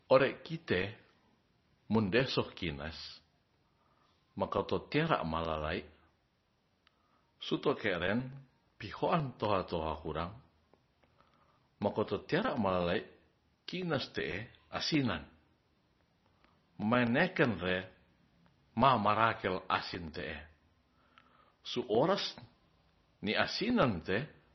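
Speech that sounds watery and swirling throughout, with dull, band-limited treble and nothing above 6 kHz, smeared consonant attacks and metallic chirps on s sounds. This is likely heavy MP3 compression, consistent with a very low bitrate around 24 kbps.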